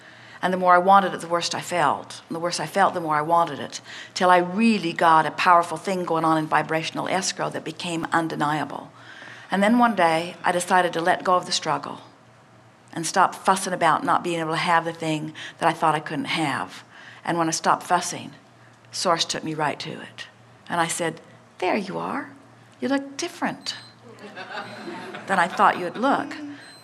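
Underrun with held sample at 8.04 s and 19.34 s: the buffer emptied and the converter held its last value, leaving flat stretches of 0.67 ms and 1.48 ms.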